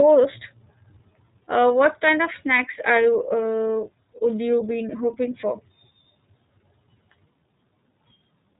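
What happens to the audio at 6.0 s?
At 6.0 s the speech is still under the iLBC codec, which runs through the whole clip. It codes each frame's excitation independently, with frames that fit the 30 ms, 13.33 kbps mode. Nothing above 3.8 kHz survives, leaving the speech narrow, slightly rough and plainly synthetic.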